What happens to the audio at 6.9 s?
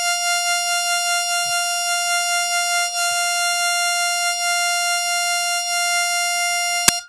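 At 6.88 s the music is interrupted by a brief burst of very loud white noise with hard edges, lasting about 10 ms. This is file tags played as audio: compressed data from an embedded cover picture is being read as sample values.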